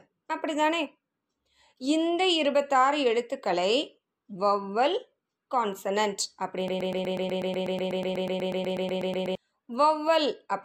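A broken-record loop runs from 6.68 to 9.35 s: a fragment of about 0.12 s repeats exactly, back to back, 22 times, producing a rapid, mechanical stutter that replaces the speech. The likely cause is a stall in the player, encoder or stream, which kept re-sending the last short fragment it held instead of new audio. Whatever speech belonged in those 2.7 seconds is missing.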